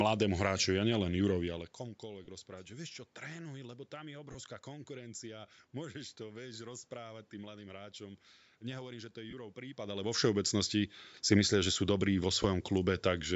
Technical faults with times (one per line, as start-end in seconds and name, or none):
2.25-2.28 lost LE Audio frames
4.32-4.36 lost LE Audio frames
9.30-9.34 lost LE Audio frames
12.42 lost LE Audio frames